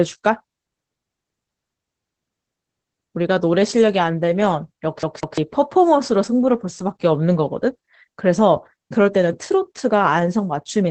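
Throughout the clip, Opus voice compression in its SILK speech mode is squeezing the signal hard. The band stops near 8 kHz and the excitation is coded coarsely, which fits a rate of about 12 kbps, so the speech sounds muffled, hoarse and faintly robotic.

From 5.03 to 5.38 s, the disc playback gets stuck on one turn, as a CD does when the laser is thrown back to the same spot. A 0.17 s slice of speech plays twice, each jump marked by a brief mute, producing a quick, even stutter.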